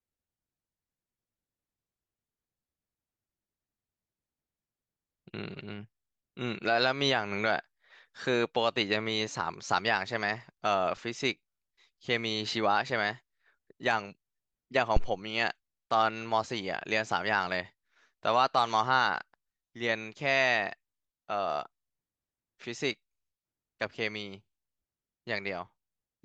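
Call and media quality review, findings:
Phantom power thump, 14.97 to 15.13 s. Deep low-frequency thump in the speech, peak about -12 dBFS, fast 37 ms decay. Probable component: mic preamp input. Phantom or another supply switched on or off on the live input; the DC step passed through the coupling capacitors into the signal path.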